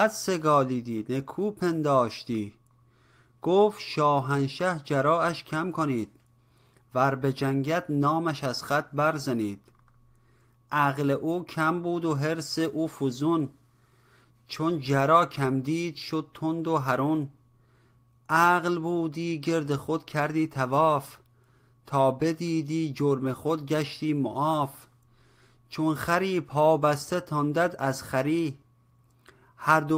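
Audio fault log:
No fault is heard anywhere in the audio.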